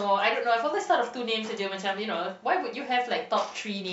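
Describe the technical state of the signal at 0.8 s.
At 0.8 s the speech signal is intact, with no fault audible at that moment.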